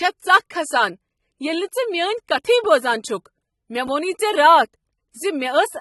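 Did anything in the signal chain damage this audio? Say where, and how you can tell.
Yes, at the codec stage, throughout the speech: it sounds dull and smeared, with fizzy warbling on sibilants. A spectrogram shows a hard ceiling at 11.8 kHz, likely AAC compression at a bitrate near 27 kbps.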